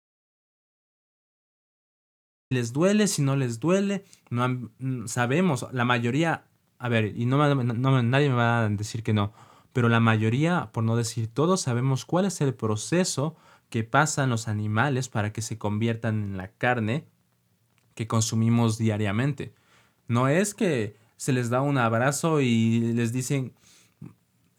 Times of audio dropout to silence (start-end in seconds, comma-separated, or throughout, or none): 0.00-2.51